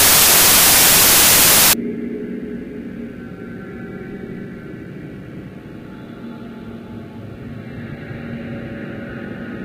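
From 0.00 to 1.73 s the audio suffers a wrong sample width fault. The data sound as if they were written as 32-bit integers but read back as packed 24-bit ones, so most values are stitched from misaligned bytes. Loud, harsh noise swamps the sound, with the original just audible underneath, slowed to 0.75 times its speed and lowered in pitch to match. A plain sample-rate error would shift speed and pitch cleanly, without this buried-in-noise texture.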